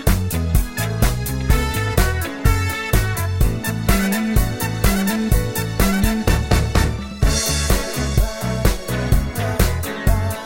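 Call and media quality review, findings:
Nothing to flag here; no faults turned up anywhere in the audio.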